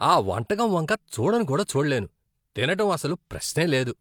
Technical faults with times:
none

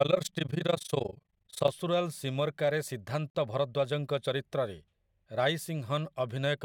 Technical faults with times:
0.00-1.72 overlap-add ripple
3.30-3.35 gap at a join of encoded pieces

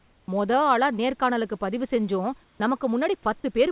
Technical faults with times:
0.00-0.28 comfort noise in place of the background
2.44-2.60 comfort noise in place of the background

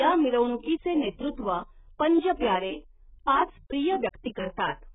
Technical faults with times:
0.00-4.95 AAC compression

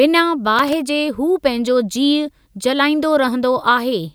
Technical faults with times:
0.59-0.73 loose connector crackle

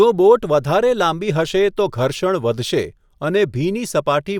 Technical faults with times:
none

